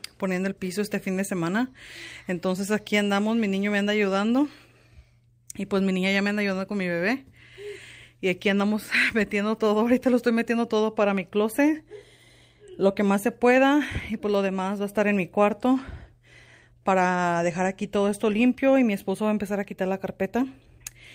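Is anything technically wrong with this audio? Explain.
No, nothing here sounds technically wrong, and the audio runs along without any glitch or fault worth pointing out.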